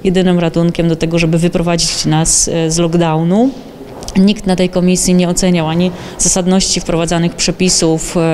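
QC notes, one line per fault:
No faults were found in this audio on review. Nothing in the sound called for a note.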